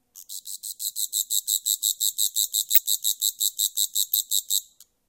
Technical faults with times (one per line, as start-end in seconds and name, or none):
2.75-2.78 corrupt frame decoded